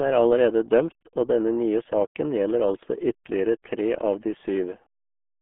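A speech recording that carries RealAudio 14.4 codec damage from start to finish: the sound is muffled and gargly, squeezed into a telephone-like band of roughly 200 Hz to 3.4 kHz, which fits an 8 kbit/s dial-up speech codec. On a spectrogram, energy stops at a hard ceiling near 3.7 kHz with empty darkness above, the lowest band is thin, and the harmonics look smeared and blotchy rather than cleanly striped.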